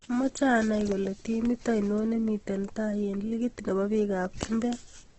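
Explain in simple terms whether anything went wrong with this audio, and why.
Something did go wrong, and it lasts from start to finish. The speech sounds rough, grainy and a little hissy, as if sand were mixed into it. Nothing is heard above about 8.2 kHz, so the brighter edges of the sound are missing. The likely cause is heavy Opus compression. The file was squeezed very small. When the encoder ran short of space, it filled gaps with noise or copied lower sounds upward, so clean tones turned coarse.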